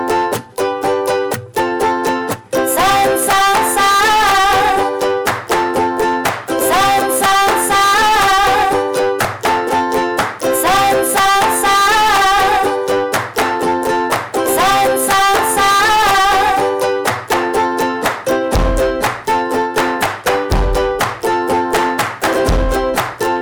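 A stage in the chain was driven about 23 dB past what it could pass, so the whole clip suffers from hard clipping from start to finish: every peak is sliced flat at the ceiling, and roughly a third of the samples sit pinned there. Those squared-off tops spray harmonics high into the spectrum, so rather than occasional crackle the audio carries a constant harsh, gritty fuzz over every loud passage, with the dynamics squashed into a dense, distorted wall.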